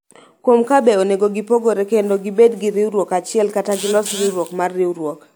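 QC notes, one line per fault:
No fault found.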